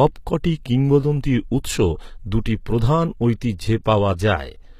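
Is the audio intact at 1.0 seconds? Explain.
No. At 1.03 s there is a repeated buffer. A tiny block of audio, about 1.45 ms long, which fits a 64-sample buffer, plays once more when new data fails to arrive in time. The same short piece therefore sounds twice, with a hard join at the repeat, and about a millisecond and a half of the original signal is lost. With a buffer this small the result registers as a click or brief buzz rather than an audible stutter.

This moment also sits inside coding damage that runs through the whole clip and is plainly audible. The spectrum stops at 14.9 kHz, and the upper range sounds synthesized rather than captured. That points to HE-AAC compression, likely at a bitrate around 20 kbps. The codec transmits only the lower band and regenerates the treble by spectral band replication, copying lower bands upward under a coarse envelope. The rebuilt harmonics do not line up with the real ones across the crossover, so s sounds come out gritty, metallic or lispy.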